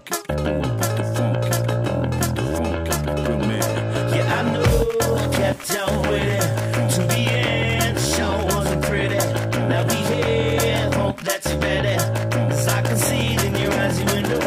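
No technical faults can be heard anywhere in this audio. Nothing in it calls for a timestamp.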